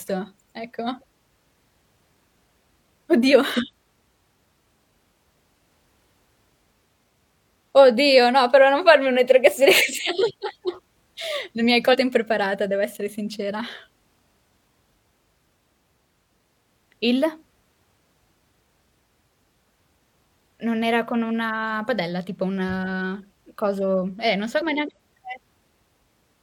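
At 3.53 to 3.58 s, and again at 11.89 to 11.96 s between "mi hai" and "impreparata devo essere sincera", damaged data in the compressed stream makes the decoder misread frames and lose sync, so it searches for the next frame header, giving a brief glitch each time.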